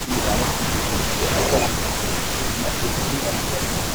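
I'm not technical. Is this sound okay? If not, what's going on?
No. There are two problems, and both come from the call's echo handling.

The first is an echo leak. At the very start, 0 to 0.11 s, a faint delayed copy of the speech can be heard, trailing about a third of a second behind. From 1.41 to 1.68 s it returns, this time nearly as loud as the speech itself, lagging by close to 0.4 s. The likely cause is that someone on the call is using a loudspeaker, and their echo canceller missed part of what their microphone picked up, so it was sent back down the line.

The second is speech suppressed in double talk. The speech dips noticeably from 0.02 to 0.64 s, briefly again from 1.32 to 1.39 s, and then for about two seconds from 1.7 to 3.82 s, where the drop is deepest. This likely happened because both sides were talking at once. The echo canceller couldn't tell the talker's voice apart from the loudspeaker echo, so it turned both down together.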